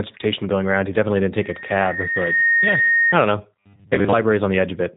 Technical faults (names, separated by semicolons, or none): G.729 codec; loudspeaker feedback squeal; robotic sound from repeated short buffers